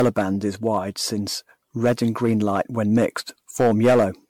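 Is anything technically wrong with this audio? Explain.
Yes. The speech carries generation loss throughout, likely from repeated MP3 re-encoding, about ten passes at around 96 kbit/s. Each pass requantises on a shifted frame grid, so noise and spectral gaps accumulate; the sound is swirly, hollow and smeared, with softened attacks and nothing above 19.8 kHz.

Hard clipping occurs at 0.00–0.21 s, 0.66–0.77 s, 1.84–3.06 s and 3.60–4.05 s, with overdrive from about 1 dB to about 8 dB. Peaks exceed what the signal path can pass and are cut flat, adding high harmonics heard as crackle on peaks, turning to harsh fuzz where the overdrive is largest, strongest in the first and last spans.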